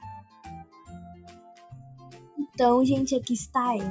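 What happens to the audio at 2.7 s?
At 2.7 s you're hearing the noise suppressor applied to music or sounds, which runs through the whole clip. A speech-tuned suppressor treats the held tones and tails as noise, so they get pulled down by around 10 dB while attacks slip through, giving a pumping, thinned-out sound inside the call's band, which tops out at 8 kHz.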